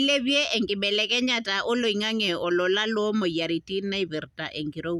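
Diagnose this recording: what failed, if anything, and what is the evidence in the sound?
Nothing failed; no fault is audible in this recording.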